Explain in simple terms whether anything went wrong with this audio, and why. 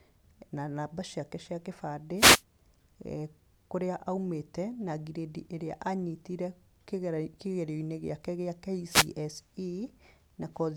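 Yes, there are two wireless microphone noise hits: 2.16–2.43 s, after "na namba ciake cia", and 8.87–9.10 s, after "gĩake gĩa". Each time, the radio signal briefly faded, so receiver hiss rose, heard as a short burst of static.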